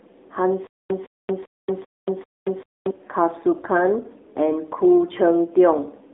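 Speech passed through the AMR narrowband mobile codec at a low mode, which fits about 7.4 kbps. Its vocal-tract model with sparse pulses makes the speech plainly buzzy and synthetic throughout. The band runs from 250 Hz to 3.7 kHz, with nothing above 3.8 kHz.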